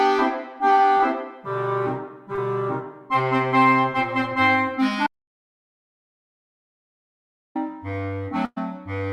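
At 0.97 to 1.01 s and again at 2.35 to 2.39 s there is short concealed packet loss. About 20 ms of audio failed to arrive each time. The receiver bridged it by extending the preceding sound and blending back, leaving a brief smear or wobble.

From 5.07 to 7.55 s the audio drops out to silence for about 2.49 s. The input was likely lost through a disconnected device, failed link or accidental mute. The signal stops abruptly, the gap holds silence with no room tone, and the sound resumes mid-flow.

At 8.45 to 8.58 s a burst of packet loss removes about 120 ms. The receiver extended the last sound for about 112 ms and faded it down, ending in roughly 30 ms of silence. This is heard as a held, decaying buzz or hiss before the audio resumes further on.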